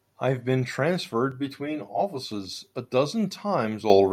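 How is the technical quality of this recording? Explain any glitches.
There are two clear problems, one in the middle of the speech and one right at the end.

From about 1.32 to 2.32 s you get channel delay, or comb filtering. One channel is running late by something like 10 ms, and when the two get folded to mono, anything they share cancels at evenly spaced frequencies, with the first notch down somewhere around 50 Hz and more stacked above it. That's why that stretch sounds hollow and phasey, with a tube-like quality.

Then at 3.9 s the microphone volume gets stepped up. It sounds like the call software decided the mic was too quiet and bumped the input gain in one go, by about 9 dB. It's a single abrupt jump, and the voice and the background get louder together, so the whole sound suddenly lifts rather than anything fading in.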